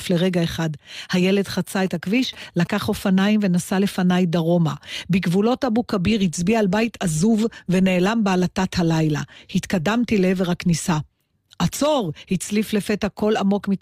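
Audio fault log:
1.86–2.67 s GSM signalling bursts: a nearby 2G phone's radio pulses, rectified in the audio path, cause galloping ticks and 217 Hz buzz about 20 dB below the speech, seen as regular vertical stripes on a spectrogram.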